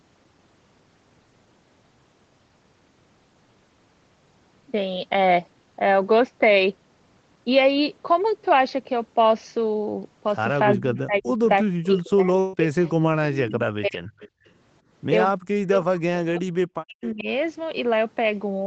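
Speech, in which the talker's level sinks sharply and parts of syllables vanish from 10.75 to 12.74 s, 13.45 to 14.05 s and 15.46 to 17.26 s, with drops of around 35 to 40 dB. This is likely speech suppressed in double talk: the echo canceller could not separate the talker from the far side and turned everything down. From 12.39 to 12.55 s, a burst of packet loss shows up as the last sound being held and faded for about 140 ms, after which the audio picks up further along with that stretch missing. A faint copy of the voice trails the original by 350 ms at 12.83 to 12.90 s, 14.20 to 14.50 s and 17.03 to 17.23 s, roughly 25 to 30 dB under the speech. This is likely echo leak, where loudspeaker sound the canceller missed was sent back. Between 14.33 and 14.45 s the room sound drops by about 25 dB for roughly a tenth of a second and then returns, which is background gated by the echo canceller as it clamped the microphone. 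Throughout, nothing is heard above 8 kHz, which fits the normal bandwidth of a wideband call codec.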